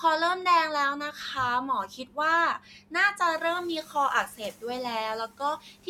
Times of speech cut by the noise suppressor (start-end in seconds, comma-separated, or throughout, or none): 1.88-2.17, 2.60-2.93, 3.83-3.95, 5.59-5.87